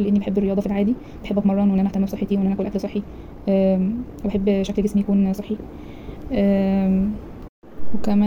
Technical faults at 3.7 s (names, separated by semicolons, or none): time-stretched section